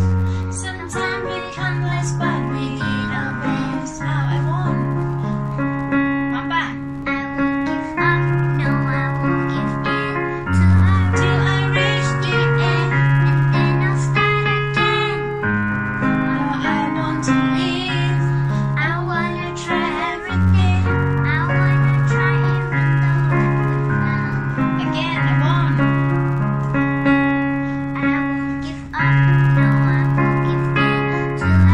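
Throughout, a filter restarted on every block resets to silence each 512-sample block, leaving faint ticks forming an 86.1 Hz buzz; spectrograms show evenly spaced vertical lines.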